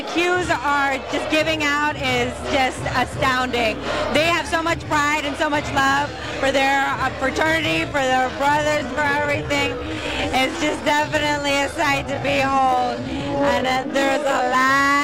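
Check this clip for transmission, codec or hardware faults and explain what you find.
One fault stands out: a time-stretched section running from 7.57 s to the end of the clip at 15.04 s. At that point the pace abruptly drops to about 0.61 times normal speed while the pitch stays put, likely from software padding the audio to a target length by repeating short grains. The slowed portion drags. On a spectrogram, harmonics hold their frequencies but stretch horizontally with blurred onsets. The waveform shows elongated envelopes with repeated cycles.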